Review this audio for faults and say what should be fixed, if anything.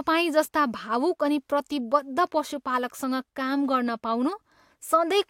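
Nothing in this speech recording needs fixing. No fault can be heard at any point, so no repair or change to the capture chain is called for.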